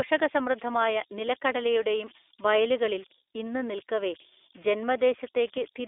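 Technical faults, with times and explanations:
Throughout: converter idle tones. A tone sits near 4 kHz, about 19 dB below the speech. An undithered delta-sigma converter is cycling through repeating bit patterns at low input levels.
Throughout: iLBC codec damage. The damage is plainly audible, the speech a little rough and synthetic, confined to roughly 300 Hz to 3.5 kHz with nothing above 3.7 kHz. The frame-by-frame excitation coding fits 20 ms frames at 15.2 kbps.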